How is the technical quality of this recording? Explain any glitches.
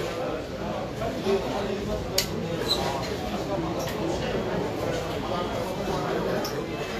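The technical quality is reduced by lossy compression damage that runs through the whole recording. Vorbis compression, likely at a low bitrate near 35 kbps, is audible from start to finish. Nothing remains above 14.2 kHz. The treble is coarsely quantised, so fine detail turns into grainy hiss. Tones sound roughened, and attacks are blurred.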